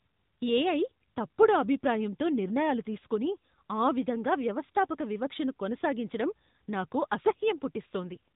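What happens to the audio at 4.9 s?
At 4.9 s you're hearing the AMR narrowband mobile codec, which runs through the whole clip. The speech is squeezed through a coarse vocal-tract model, so it comes out plainly buzzy and synthetic, with nothing above about 3.8 kHz, which fits roughly 10.2 kbps AMR-NB.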